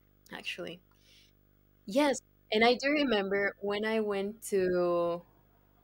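From start to finish the speech carries video or display buzz: a display or video cable is coupling into the audio path, leaving a rasping 50 Hz buzz, the picture's field rate, with hash above it, plus a thin whine at 15.6 kHz from the line scan, sitting around 35 dB below the speech. A spectrogram shows a 50 Hz harmonic comb and a steady line near 15.6 kHz across every frame, continuing through pauses.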